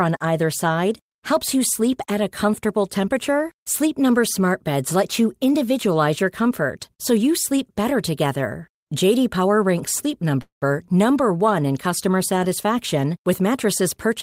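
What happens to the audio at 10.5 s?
A call audio freeze runs from 10.41 to 10.63 s. The sound stops moving forward and the last instant is stretched into a brief fading buzz, then about 130 ms of silence, before the audio picks up exactly where it left off. This points to packets likely being held up in transit until the jitter buffer ran dry. Nothing is lost; instead, roughly 200 ms of filler is inserted, so everything after it arrives that much later.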